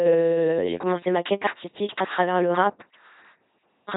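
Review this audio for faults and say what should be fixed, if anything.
The speech passes through an LPC-10 vocoder for the whole clip. Each moment is resynthesised through a short all-pole vocal tract filter excited by either a pulse train or noise, so the voice comes out as a flat, buzzing, robotic tone with heavy damage, and with hiss or buzz where the voiced/unvoiced choice goes wrong. Nothing is present above 3.9 kHz, and the coarse rendering points to a 2.4 kbit/s stream. To prevent it, route this audio through a modern waveform or hybrid codec at a higher bitrate instead of the LPC-10 link.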